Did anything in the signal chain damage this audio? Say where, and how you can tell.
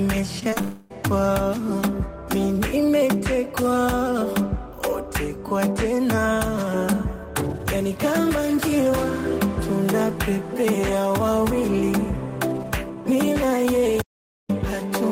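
Yes. Between 0.39 and 0.61 s there is repeated packet loss, producing robotic sound in the network stage. Four short holes, the longest 22 ms, are each patched by stretching the previous sound, so about a third of that span is concealed. Brief, recurring patches separate this from a single long outage.

From 0.61 to 0.92 s the sound is smeared into a continued, decaying tone rather than cut, with nearly 0.3 s of real audio never arriving. This is most likely a long network dropout. The concealment never reaches true silence, which separates it from a recording-side cut.

At 14.02 s the audio stops dead and returns at 14.49 s, leaving about 0.47 s of silence with no room tone. This is an audio dropout to silence, likely from the input being lost while the recorder kept writing silence. There is no smeared fill as in network concealment.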